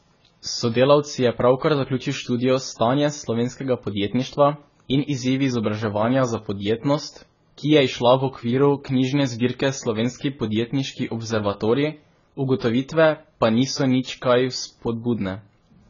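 Speech that sounds dull and smeared throughout, with nothing above 7 kHz and a warbly, fizzy edge on sibilants, likely from heavy AAC compression at a low bitrate around 16 kbps. There's also a pre-echo at 12.59 to 12.62 s, a brief 24 ms hiss smeared ahead of a sharp attack, so the onset sounds softened.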